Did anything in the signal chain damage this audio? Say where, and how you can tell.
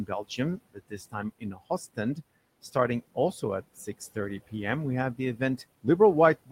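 Yes. Noise suppressor artifacts from the call-processing stage run through the whole clip. The room noise, about 19 dB below the speech, is pulled down by about 20 dB between phrases and rises again under speech. A spectrogram shows the noise floor switching frame by frame with the speech envelope.

Speech cut by the noise suppressor, also in call processing, shows at 0.07–0.39 s, 0.57–1.15 s and 1.39–1.61 s. Parts of each span sink by about 18, 21 and 20 dB. The waveform shows abrupt envelope dips there, and the spectrogram shows faint, missing consonant energy.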